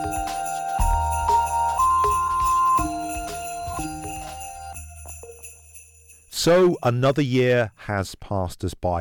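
Hard clipping hits this audio three times: 0.81–1.38 s, 6.47–7.62 s and 7.98–8.01 s. Peaks overran a stage by about 3, 9 and 2 dB, flattening tops into crackly, fuzzy distortion.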